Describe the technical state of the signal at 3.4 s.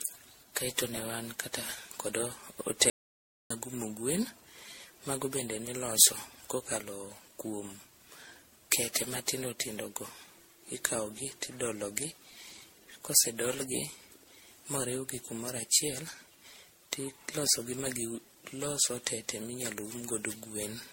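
Audio dropout to silence covers 3.4 s. The speech cuts out at 2.90 s and returns at 3.50 s, a gap of about 0.6 s. That gap is silence, not a quiet passage: no room tone, no breath, no noise floor. The likely cause is a lost input, such as a disconnected device, a failed link or a mute, while the recorder kept writing empty samples. Whatever was said during those 0.6 s is simply gone.

Generation loss runs through the whole clip, so the audio on either side of that silence carries it too. The speech sounds swirly, smeared and hollow, with blurred consonant attacks, and nothing is present above 16.5 kHz. This most likely comes from MP3 encoding at 64 kbit/s repeated roughly fifteen times. Each decode and re-encode quantises again on a shifted frame grid, so the noise and spectral holes stack up beyond what a single 64 kbit/s pass would cause.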